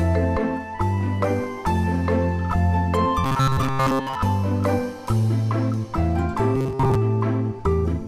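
From 3.24 to 4.16 s and again from 6.56 to 6.95 s, the sound turns into a rigid metallic buzz at 133 Hz: robotic sound from repeated short buffers, likely from about 7.5 ms blocks looped over most of the audio. A spectrogram shows flat, evenly spaced 133 Hz harmonics. The waveform repeats identical cycles.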